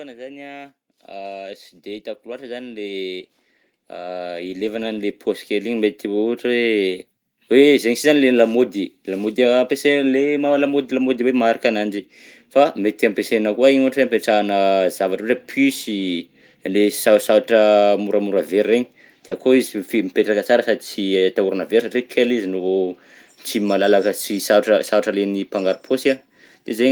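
Automatic gain rising runs from 0.16 s to 26.7 s: the gain control judged the incoming speech too quiet and kept raising its gain, about 20 dB in total, so the voice and the background noise swell together slowly across almost the whole clip.

Short concealed packet loss follows at 19.27 to 19.33 s, where 40 ms of the call arrived too late to decode. The receiver bridged the gap by extending the preceding sound, then blended back into the real signal, leaving a brief smear or wobble in the speech.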